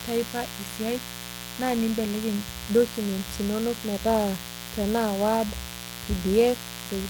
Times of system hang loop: none

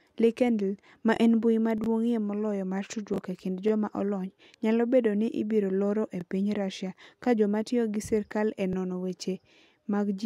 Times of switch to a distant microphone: none

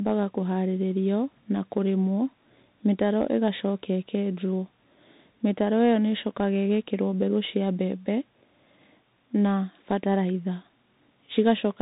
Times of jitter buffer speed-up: none

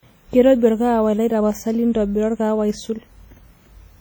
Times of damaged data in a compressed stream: none

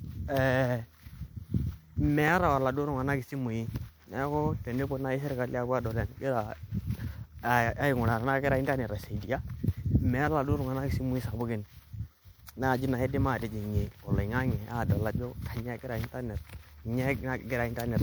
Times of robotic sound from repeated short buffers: none

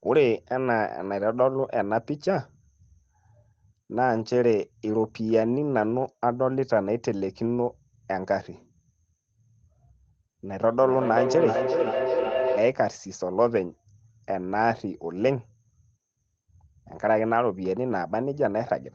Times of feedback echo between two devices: 10.78-12.82

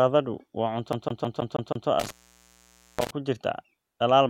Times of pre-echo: none

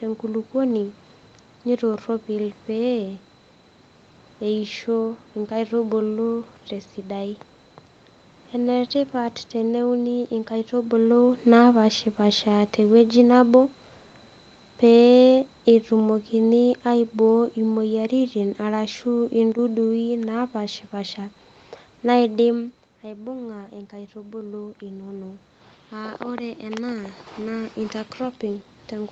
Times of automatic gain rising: 23.02-29.11

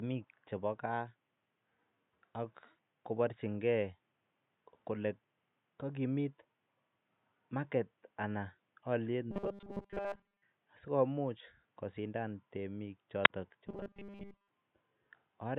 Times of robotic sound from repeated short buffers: 9.31-10.43, 13.67-14.49

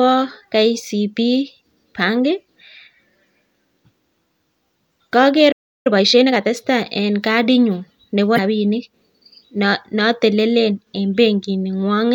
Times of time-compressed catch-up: 5.87-6.53

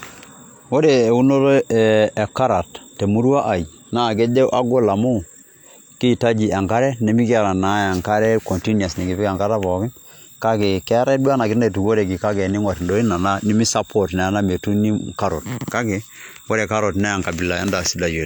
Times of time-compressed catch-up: none

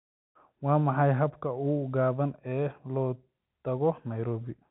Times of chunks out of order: none

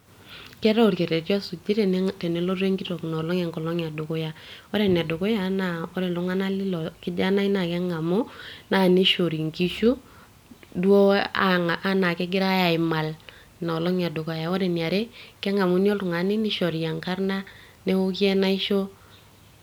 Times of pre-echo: none

